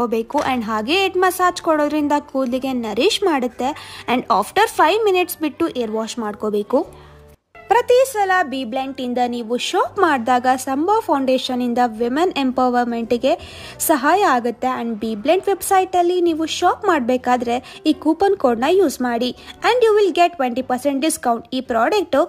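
The signal holds steady throughout, with no audible interruptions, level jumps, distortion or timing irregularities at any point.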